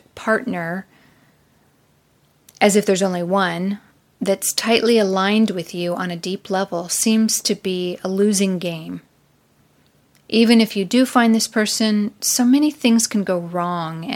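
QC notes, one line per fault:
No faults found anywhere in this speech recording.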